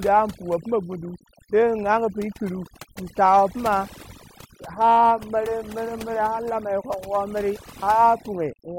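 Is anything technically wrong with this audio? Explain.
Yes, there's overdone noise removal running through the whole speech clip. The noise reduction was pushed far too hard, so any frequency band sitting close to its idea of the noise floor gets pulled way down or switched off, and the quieter parts of the voice get swept out along with the noise. You hear it as a background that drops and breaks up into little twinkling, warbling specks.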